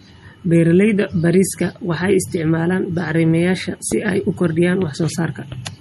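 The whole clip has plainly audible MP3 compression damage, likely from a low bitrate around 48 kbps: watery, swirly speech with nothing above 14 kHz. At 3.92 to 3.94 s a single loud pop jumps out about 10 dB above the speech, likely a brief voltage spike, while the speech carries on underneath.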